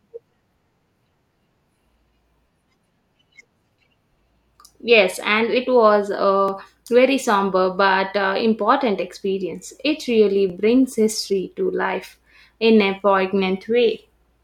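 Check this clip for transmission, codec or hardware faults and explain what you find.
Overlapping chunks cause brief stutters at 2.47 s, 6.48 s (between "and it was" and "very somber but uh") and 10.50 s (just before "brings history to life"). Each join replays about 12 ms of sound because every 4-second block starts before the previous one ends. Unlike a dropout, nothing goes missing. The tick comes from doubled material, and it recurs about every 4 seconds.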